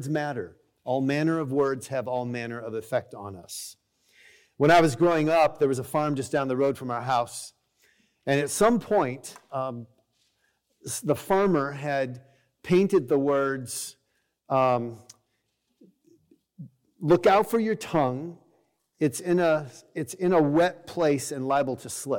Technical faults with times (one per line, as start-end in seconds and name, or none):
none